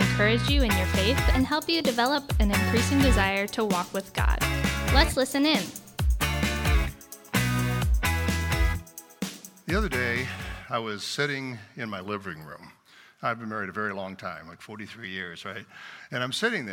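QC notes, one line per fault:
1.33–2.15 s and 5.01–6.75 s, drift correction step: speed jumps up 6.21% and pitch rises 104 cents, about a semitone, then snaps back. Likely a clock-matching resampler speeding up to drain its buffer.
12.07–12.80 s, drift correction step: speed drops 6.21% and pitch falls 111 cents. Likely the same resampler slowing down to refill.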